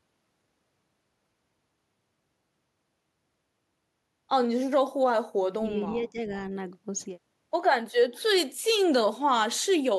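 A speech recording with two short level collapses around the 6 s mark and a faint delayed repeat near the end. From 5.56 to 5.64 s the voice drops sharply, by roughly 25 dB, and from 5.85 to 6.35 s it sinks again by around 15 dB, pulling down about a third of a second of speech. This is most likely speech suppressed in double talk: with both ends active at once, the echo canceller could not tell the near talker from loudspeaker echo and attenuated everything it captured. From 8.14 to 8.22 s a weak copy of the voice returns about 0.4 s after the original, sitting roughly 30 dB below the direct speech. That points to an echo leak, likely a far-end loudspeaker pickup that the remote echo canceller failed to fully remove before sending it back.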